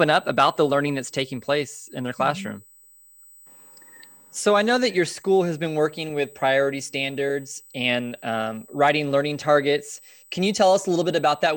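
USB whine runs throughout the speech, a fixed-pitch tone at 8 kHz with its strongest component at 16 kHz, roughly 30 dB below the speech. Current drawn in 125-microsecond USB microframes leaks through power or ground into the audio path, producing this steady high whine.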